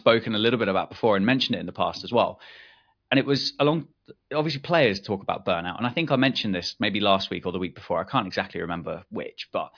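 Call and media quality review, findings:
No audible faults found in this speech recording.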